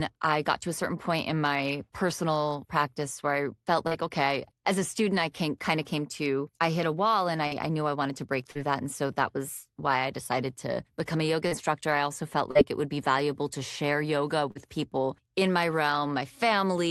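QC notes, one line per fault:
3.87, 7.47, 8.51, 11.47, 12.51 and 14.51 s: short concealed packet loss. At each point about 40 ms of the call audio arrived too late for the decoder, so the receiver extended the preceding sound to cover the gap, carrying on its pitch where it was voiced or substituting shaped noise where it was not, then crossfaded back into the real signal. Each event is a brief smear or wobble, and a short consonant can drop out. The audio came through a call codec band-limited near 12 kHz.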